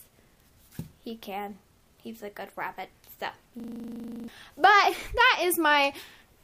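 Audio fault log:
3.60 to 4.28 s, system hang loop: a 40 ms slice of audio repeats exactly, 17 times in a row. The system froze while the sound hardware kept replaying the same ring buffer. Because each pass lasts 40 ms, the slice cycles at 25 Hz. At that rate it sounds like a rapid, rattling stutter with a buzzy edge. Normal playback resumes afterward, but about 0.7 s of audio is simply missing.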